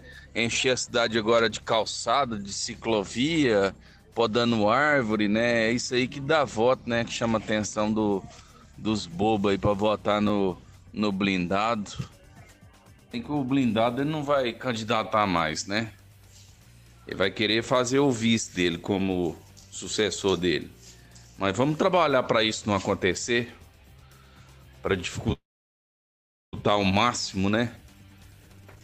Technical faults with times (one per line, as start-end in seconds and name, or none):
25.32-26.55 call audio freeze
27.36-28.82 jitter buffer speed-up